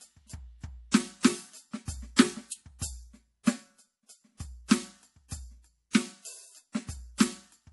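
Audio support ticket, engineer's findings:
MP3 compression, throughout the music. Treble stops dead near 11.5 kHz. Watery, swirly texture, with attacks smeared. Likely an MP3 encode starved of bits. A low bitrate, around 48 kbps, fits this. The encoder cut the top band and dropped weak frequency lines, which flicker frame to frame. Damage plainly audible.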